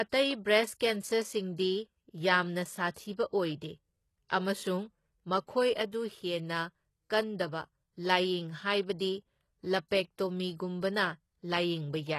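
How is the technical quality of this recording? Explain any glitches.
The recording is noticeably degraded: the speech carries audible low-bitrate codec damage throughout, plus four brief pre-echo smears before sharp attacks.

Across the whole clip the treble sounds synthetic and gritty, with s sounds turned lispy and metallic and nothing above 12.3 kHz. The likely cause is HE-AAC compression at a very low rate, around 16 kbps. It codes only the lower spectrum and rebuilds the highs from copied lower bands, so they never quite match the original.

Pre-echo appears at 2.91–2.96 s, at 4.28 s, at 5.90–5.93 s just before "ꯍꯦꯟꯅ ꯀꯟꯗꯕ ꯂꯥꯢꯌꯦꯡ ꯍꯥꯢꯕꯗꯤ", and at 9.88–9.91 s. Each is a short hiss running 18 to 55 ms ahead of an onset, softening its attack. The codec spreads noise across a whole block, so it leaks into the quiet moment before the attack.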